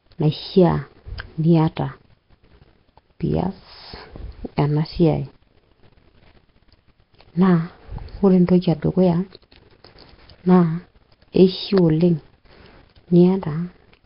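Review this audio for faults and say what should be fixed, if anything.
Throughout the speech, a rough, hissy halo and a smeared, underwater quality are present, with nothing above 5.3 kHz. Nellymoser compression is the likely cause: quiet bands received no bits and were filled with noise, and the heavy damage fits a bitrate near 22 kbps. To prevent it, record or export with a modern codec at a higher bitrate.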